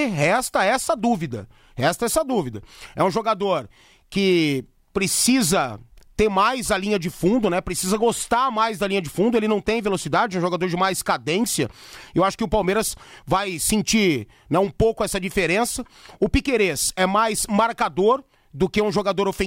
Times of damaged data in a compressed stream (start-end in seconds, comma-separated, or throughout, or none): none